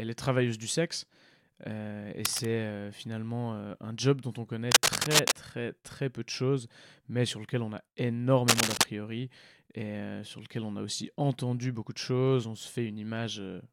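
From 2.25 to 2.46 s, then 4.71 to 5.32 s and 8.48 to 8.84 s, bursts of scratching, rustling noise sit over the speech. This is cable scratch noise, likely from a worn cable or connector being moved. The first burst is a little quieter than the speech. The later two are slightly louder. On a spectrogram each burst shows as ragged broadband smearing. The waveform shows dense, uneven spikes riding on the signal.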